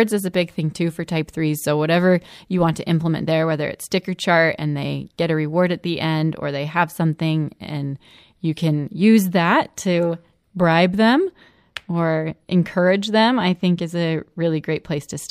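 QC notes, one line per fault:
No faults found.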